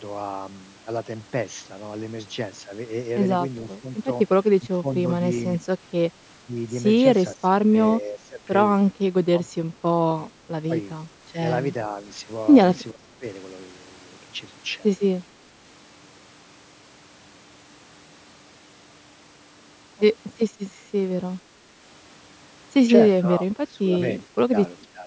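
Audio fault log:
4.67–4.87 s, 6.45–6.51 s, 7.35–8.43 s, 12.91–13.25 s, 23.22–25.06 s, speech suppressed in double talk: the voice sinks by roughly 10 to 20 dB and breaks into patches, likely because an echo canceller mistook it for loudspeaker echo while both ends spoke. Unlike network dropouts, these are partial, uneven dips rather than clean gaps.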